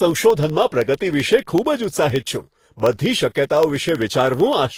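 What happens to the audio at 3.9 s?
At 3.9 s the speech falls inside a run of periodic USB or driver dropouts that lasts from 0.11 s to 4.72 s. Every 64 ms, roughly a tenth of a millisecond of audio is lost and replaced by silence, most likely because a background task stalls the USB bus or audio driver on a fixed schedule. There are about seventy of these gaps, heard as small ticks only while the voice is sounding. Random clicks or network packet loss would be irregular and usually longer. These are tiny and spaced exactly 64 ms apart, about 15.6 per second.

Under those ticks, the whole clip, including this moment, carries the sound of transcoding between lossy codecs. Nothing remains above 15.8 kHz, and two different kinds of artefact are heard together. The mix suggests Vorbis followed by Opus, at rates around 36 and 32 kbit/s. A single encode at a low bitrate would give only one consistent artefact character. 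Here the second codec has spent bits re-encoding the first codec's artefacts and then added its own, and the lowest cut-off from the chain is the one that remains.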